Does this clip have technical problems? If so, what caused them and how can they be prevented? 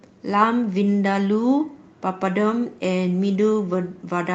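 No, the speech has no technical problems that need fixing. It has gone through a call path with an Opus codec, and its top end stops at about 8 kHz, which fits a wideband call setting of around 24 kbps.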